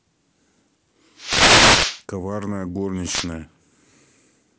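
A burst of static swishes across the speech from 1.16 to 2.03 s, and a shorter one from 3.03 to 3.30 s: wireless microphone noise hits, where the FM radio link faded as reflections cancelled, letting receiver noise rise over the voice.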